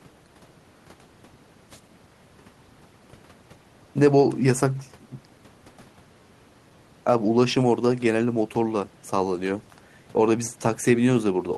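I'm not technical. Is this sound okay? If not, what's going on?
Yes, nothing in this recording points to a technical problem with how the sound was captured or delivered.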